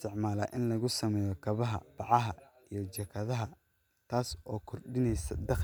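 No technical faults can be heard anywhere in this recording of speech.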